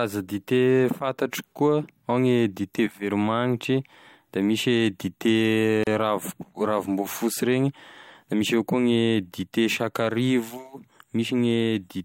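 At 5.84 s the speech drops out for about 33 ms, a gap at a join of encoded pieces, and then resumes exactly where it left off. The clip appears to be built from pieces roughly 6 s long, each encoded on its own and spliced without trimming the encoder's start-up delay and final-frame padding. It sounds like a brief hiccup. On a waveform it is a flat stretch with smeared edges, and a spectrogram shows a narrow vertical blank band slightly blurred at its borders.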